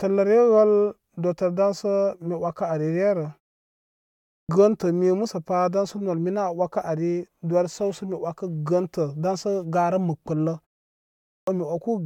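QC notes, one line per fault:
4.11–4.49 s and 11.12–11.47 s: clipped start after a pause. After silences of 0.79 s and 0.54 s, the output device wakes late and swallows the first 0.38 s and 0.35 s of speech. Words begin abruptly, missing their opening sounds, whereas muted pauses would only drop the background.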